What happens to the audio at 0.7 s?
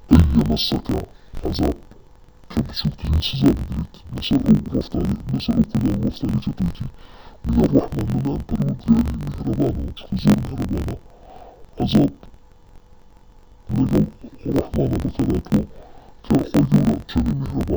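Interleaved audio read as planar, running throughout: 21.77 ms blocks split into halves drop the sound an octave and buzz at 45.9 Hz, yet the pace stays correct, unlike a slowed playback.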